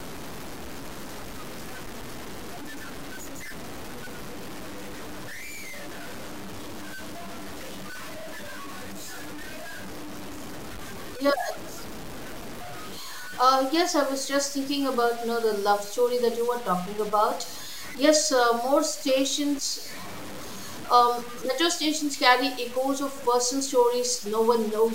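From start to finish the speech has grainy, signal-following grit, with quiet tails sputtering out: low bit depth without dither, likely six-bit truncation, noise only about 15 dB down.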